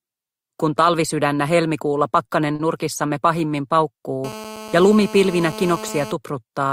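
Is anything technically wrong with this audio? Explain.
Yes, there are two faults.

At 2.55 to 2.61 s there is a short stall from a late packet. The jitter buffer ran dry, so the receiver held the last sound for about 40 ms, then resumed where it left off. Nothing is lost, but timing slips by 40 ms. It shows as a flat, smeared patch on a spectrogram.

From 4.24 to 6.12 s there is a GSM phone buzz: a harsh, raspy 217 Hz drone at about -14 dB relative to the signal. It comes from a nearby phone on a call, whose radio bursts get rectified in the audio circuit. It is steady throughout, and on a spectrogram it appears as evenly stacked horizontal harmonic lines.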